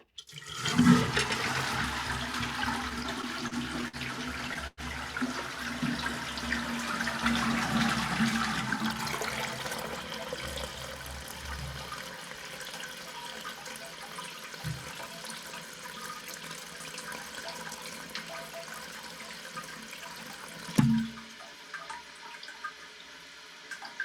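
A recording of everyday sounds. From 2.89 to 3.96 s it stutters through repeated stalls: seven brief hitches, the longest 51 ms, where the last sound is held and smeared over instead of moving on. Together they fill about 137 ms, roughly 13% of that stretch, and nothing is actually lost. The audio drags because packets kept arriving late, so the jitter buffer kept running dry and the receiver padded each hole by extending what it already had. At 4.67 s there is a call audio freeze lasting to 4.80 s: the sound hangs and decays, with the final 30 ms falling to silence, before picking up exactly where it left off. About 103 ms was inserted and the playback delay grew by the same 103 ms. The likely cause is a burst of packets held up in transit that emptied the buffer, leaving the receiver to bridge the wait with a fading continuation. From 19.87 to 20.66 s the sound briefly runs fast, at about 114% speed with no change in pitch, so that passage feels hurried and compressed. 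This is a jitter buffer speed-up: after late packets arrived in a bunch, the buffer held more than it wanted, and the receiver trimmed a series of tiny pitch-period slices, roughly a tenth of a second in all, to pull the latency back down.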